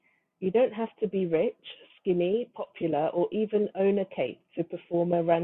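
Nothing in the recording stood out as a technical problem on listening.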